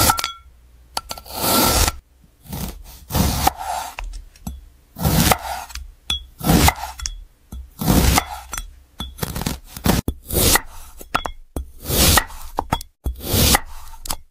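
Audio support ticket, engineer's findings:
No fault found in this audio; nothing to report for the ticket.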